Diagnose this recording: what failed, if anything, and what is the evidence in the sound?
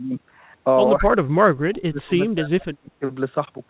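The call-processing stage likely failed: speech suppressed in double talk, with the echo canceller unable to separate this talker from loudspeaker echo. The speech dips by about 15 dB from 1.0 to 1.13 s, then by up to about 30 dB from 1.39 to 3.04 s.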